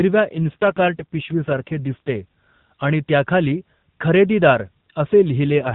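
A weakened radio link pushed the AMR codec into an AMR rate drop twice, from 0.32 to 2.19 s and again from 5.44 s to the end. Fewer bits went to the speech itself, which fits a step down from 12.2 to 5.9 kbps. The band and continuity stay intact, with no gap, but the speech turns rougher, buzzier and more synthetic until the rate recovers.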